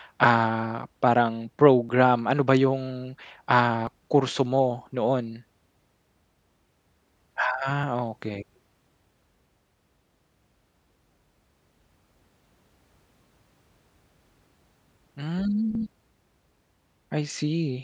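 At 1.89, 3.87, 7.83, 9.81 and 15.75 s the speech jumps forward by about 20 ms. The two sides meet directly, with no silent gap, which sets these apart from dropouts that leave a hole. All the times fall on a 2 s grid, and that regular spacing points to audio missing between chunks. The likely cause is a recorder or processor losing a sliver of signal each time it closes one 2 s block and opens the next.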